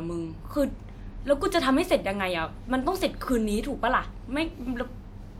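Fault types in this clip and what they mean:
No technical faults can be heard anywhere in the speech signal, which stays continuous and stable throughout.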